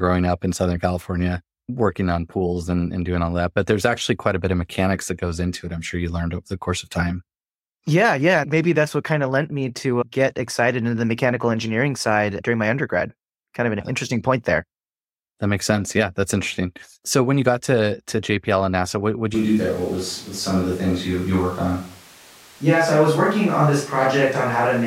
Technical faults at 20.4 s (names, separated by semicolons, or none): switch to a distant microphone